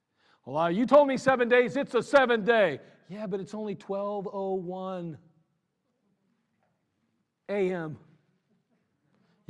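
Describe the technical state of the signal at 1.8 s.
At 1.8 s the speech signal is intact, with no dropout, clipping, distortion or other audible fault.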